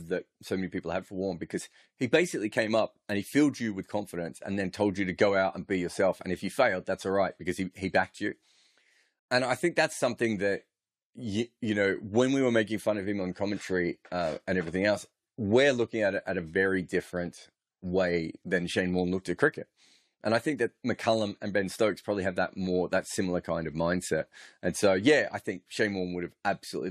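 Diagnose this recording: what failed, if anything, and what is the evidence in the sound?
Nothing failed: the speech signal stays continuous and intact, with no defect attributable to the wiring, converter, buffering, format conversion, processing, transmission, storage or playback stages.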